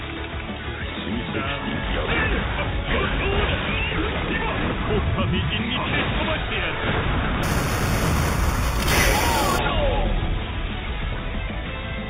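From 7.43 s to 9.59 s there is imaging from sample-and-hold upsampling. The rate was raised by holding each sample for several output samples, with no smoothing filter afterwards. The pattern fits a jump from 8 kHz to 48 kHz. Mirrored copies of the spectrum appear above the original band. The first sits between 4 kHz and 8 kHz, about 13 dB below the signal. It sounds like a bright metallic fizz that rises and falls with the sound.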